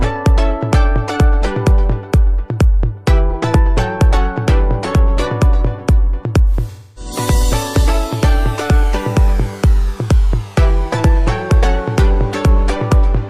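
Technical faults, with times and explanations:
3.30 to 3.35 s, AAC frame loss with concealment: one frame, about 43 ms, goes missing. The decoder reuses the last good spectrum, leaving a brief smeared, noisy blip.
6.71 to 7.12 s, AAC frame loss with concealment: a run of frames, about 256 ms, is lost. Concealment repeats the old spectrum, decays towards silence, then fades back in.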